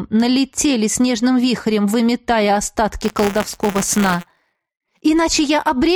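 From 3.02 s to 5.03 s the audio carries buffer tearing, a steady robotic buzz at about 172 Hz, which fits a 256-sample buffer. The write and read positions in the ring buffer have drifted into each other, so a small slice of every period, a few percent, replays audio from roughly 20 ms earlier, hard-spliced at both ends. On a waveform these show as regular discontinuities; a spectrogram shows vertical striping and harmonic combs spaced at 172 Hz.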